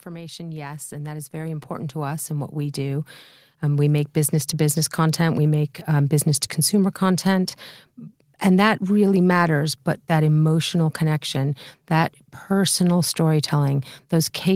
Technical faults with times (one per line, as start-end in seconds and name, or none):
0.05-4.81 automatic gain rising